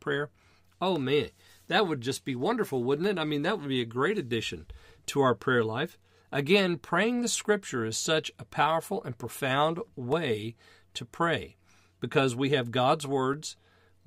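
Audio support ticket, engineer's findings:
Block of digital silence at 0.96 s (0.71 ms), 10.12 s and 13.34 s (1.33 ms each, fits a 64-sample buffer). Ticks from hard cuts to zero. Flatline notch on the waveform, full-height vertical line on the spectrogram. Likely an audio buffer underrun.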